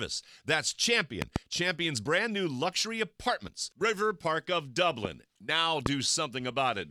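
At 1.22 to 1.38 s a loud pop arrives as a quick double thump, peaking around 20 dB above the sound. Single pops follow at 5.05 to 5.07 s, somewhat softer at about 15 dB, and at 5.86 to 5.88 s, again around 20 dB. Each is likely a voltage pulse from a switch, plug or static discharge. Unlike a dropout or a splice click, the sound carries on uninterrupted underneath.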